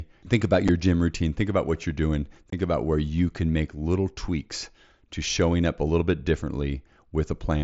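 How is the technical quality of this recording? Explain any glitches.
The recording carries two brief dropouts on a wideband headset link, with the mSBC codec adding only light graininess. Unconcealed Bluetooth headset packet loss occurs at 0.68 s, just before "gym routine", and from 2.51 to 2.53 s, between "about what you're doing" and "about where you can". Voice packets between headset and phone went missing and silence or an idle pattern replaced them, with nothing filling the gap. The first hole lasts about 7.5 ms. The second, about 22.5 ms and consistent with three lost 7.5 ms packets, is a clipped gap with abrupt edges.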